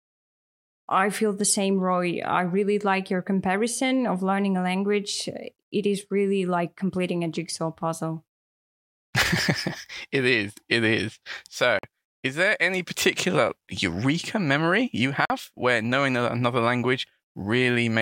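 Bluetooth dropouts at 11.79–11.84 s, just before "is there any particular", and at 15.25–15.30 s, between "particular eureka memory you" and "where knowing another": the speech cuts to silence for about 46 ms each time, likely because packets reached the headphones late and were discarded. The gap fits two lost packets, and the speech resumes further along, as if it had kept playing.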